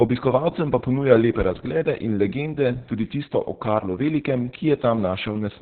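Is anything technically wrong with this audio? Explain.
Yes. Opus voice compression runs throughout the speech. The codec is working in its SILK linear-prediction mode at a very low rate, which fits about 6 kbps with long 60 ms frames, and at that rate it narrows the band to narrowband, so nothing is heard above about 4.3 kHz. The excitation is coded coarsely, leaving the speech heavily damaged: muffled and dull, with a hoarse, slightly robotic quality.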